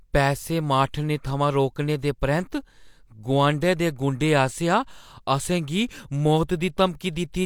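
Nothing in this speech recording stands out as a technical fault, so there's no moment here that calls for attention.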